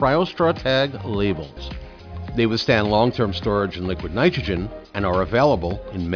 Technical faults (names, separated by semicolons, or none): none